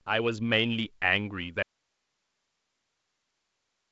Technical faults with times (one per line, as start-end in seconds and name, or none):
1.62-3.92 audio dropout to a faint residue